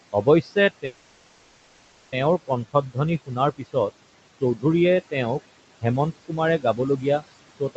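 Noise suppressor artifacts run through the whole clip. The suppressor lowers the room noise by about 21 dB in every band it judges to be steady noise, frame by frame. That noise sits about 14 dB under the speech. So the background sinks in the pauses and comes back under the speech.

From 0.13 to 3.76 s comes the first stretch of speech cut by the noise suppressor. Here it mistakes parts of the speech for noise. Roughly half a second in total is pulled down, by as much as about 21 dB. Soft consonants and word endings sound swallowed.

Inside that stretch, from 0.85 to 2.14 s, there is a call audio freeze. The last sound is stretched into a fading buzz or hiss for 1.27 s, with no true silence. Then the speech resumes where it stopped, with nothing lost, only delayed. The likely cause is packets held up in transit, so the jitter buffer ran dry and the receiver filled the gap.

The suppressor cuts speech again from 4.41 to 4.64 s, by about 13 dB over a tenth of a second. 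It does so from 6.28 to 7.23 s, by about 14 dB over roughly 0.3 s. Finally, from 7.6 s to the end it cuts by about 22 dB. Each time the sound turns faint.

The top end stops near 8 kHz, which fits the call's wideband coding.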